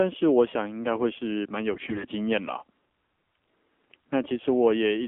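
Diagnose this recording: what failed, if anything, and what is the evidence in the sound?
Codec stage: the speech went through AMR narrowband mobile coding at a low rate, which fits 7.4 kbps. The band is confined to about 250 Hz to 3.4 kHz and the voice sounds plainly buzzy and synthetic.

Network stage: AMR bit errors from 1.72 to 2.07 s. A heavy share of flipped bits in a run of frames misplaced the excitation pulses, so the voice turns hoarse and gargly while keeping its pitch.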